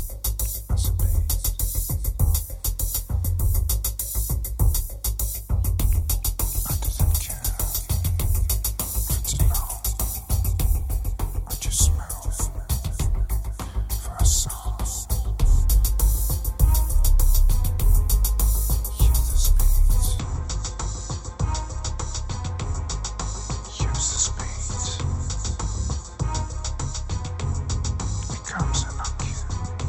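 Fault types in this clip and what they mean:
Input switched to a poorer device: From 20.19 s to the end, the sound abruptly turns duller and narrower. Nothing is heard above about 7.9 kHz, so the upper detail is gone. The level drops by about 10 dB at the change. A faint new background noise appears, roughly 45 dB below the signal. There is no gap at the switch. The likely cause is the recording input moving to a lesser microphone or headset.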